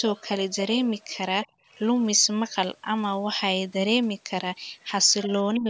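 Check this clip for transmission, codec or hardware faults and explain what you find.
The speech drops out twice, at 1.5 to 1.64 s and 5.57 to 5.66 s, falling by about 30 dB and about 25 dB. This is likely speech suppressed in double talk: an echo canceller, unable to separate near speech from loudspeaker echo, attenuated both.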